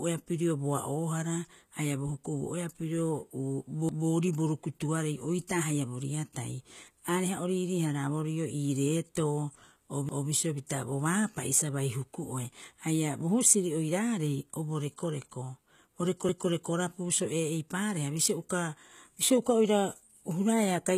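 Throughout, sibilants and upper harmonics sound gritty and metallic, with nothing above 14.9 kHz. This is likely HE-AAC compression at a rate that fits about 20 kbps: the treble is rebuilt by copying lower bands upward, so it doesn't match the original harmonics.

At 3.89 to 4.09 s, just before "bo rukutuarei oitaa haia", and again at 10.09 to 10.29 s, just after "reetoo o", a 200 ms stretch plays twice as an audible stutter. These are overlapping chunks: the audio was handled in 6 s pieces, each starting before the previous one finished.

At 10.67 s, between "reetoo o bisio" and "bo baapa'i sa", a brief hiss lasting about 16 ms runs ahead of an attack, and at 18.49 s a similar 10 ms hiss does the same. This is pre-echo: the codec spread quantisation noise across its whole block, so noise sized for the loud onset leaks into the quiet moment before it.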